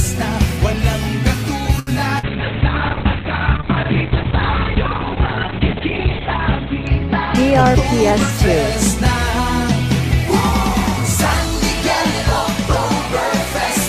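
At 1.79 s a short stall from a late packet begins and lasts until 1.90 s. The jitter buffer ran dry. The receiver held the last sound for about 75 ms and then resumed at the same point. Nothing is lost, but the sound hangs, with a faint buzz or dip. Everything after it arrives about 75 ms later.

From 2.19 to 2.26 s there is a short concealed packet loss. About 40 ms of audio never reached the decoder. The receiver covered the gap by extending the preceding sound and blending back in. It comes across as a brief smear.

At 2.27 s a call bitrate drop sets in and lasts until 8.65 s. The encoder was starved of bits. The coarseness fits a fall from 48 kbps to about 6 kbps. The top end is cut from 20 kHz to 4 kHz. The sound turns muffled and rough. It is at its worst for about 4 seconds.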